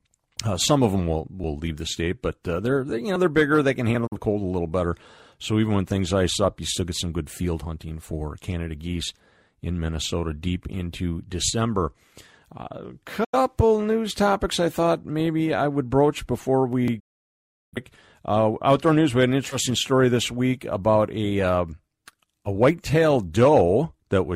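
At 4.07 to 4.16 s the sound fades within about 8 ms into a short silence, a digital broadcast dropout. The receiver muted after a corrupted frame, losing about 43 ms of programme. A second, longer hole of this kind runs from 13.24 to 13.37 s, just before "news topics I thought", and fits two lost frames. Unlike a skip, each dropout leaves an audible gap.

At 16.88 s, right after "I would broach before", there is a jump with no silence at all. This is most likely a dropped buffer (overrun): roughly 20 ms of audio was overwritten before it was read, and the two sides were spliced together directly.

From 17.00 to 17.78 s a third dropout silences about 0.7 s, consistent with a run of lost frames, again faded out rather than clicked.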